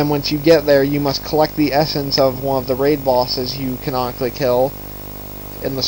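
Video or display buzz runs throughout. A screen or video cable couples into the audio, giving a 50 Hz buzz with hash and a 15.6 kHz line-rate whine, fairly strong under the sound.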